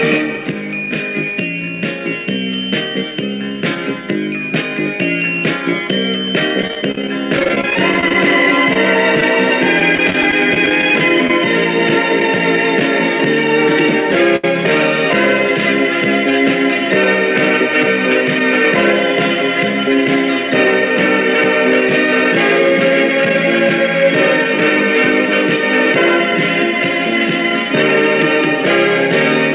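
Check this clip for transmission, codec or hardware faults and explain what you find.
Three kinds of network fault show up in the audio, all patched by the receiver's concealment, over a narrowband path consistent with G.711 mu-law at 64 kbps that carries nothing above 4 kHz.

Repeated packet loss (robotic sound) hits twice. From 6.62 to 8.15 s the sound turns choppy, with 23 short holes of up to 29 ms each. About 18% of that stretch is synthetic fill, and roughly 200 ms of real audio is gone. From 9.80 to 10.83 s it happens again more mildly: 10 holes of up to 19 ms, about 10% concealed, and around 110 ms lost. Each time packets went missing in quick succession, so the decoder kept extending the last sound, and that fill gives the choppy texture with pieces missing.

A short stall from a late packet comes at 8.73 to 8.76 s and again at 14.36 to 14.45 s. Each is a brief hold where the sound hangs, for 22 ms and then a longer 74 ms, with a slight buzz or dip. 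A packet arrived late, the jitter buffer ran dry, and the receiver stretched the last sound until it came, then carried on. Nothing is missing, but the timing lurches by the length of the delay.

A short concealed packet loss at 11.27 to 11.30 s is heard as a quick smear or wobble. About 10 ms of audio never reached the decoder in time. The receiver covered the gap with roughly 19 ms of continued sound and then blended back into the real signal, so anything very brief there may be softened or lost.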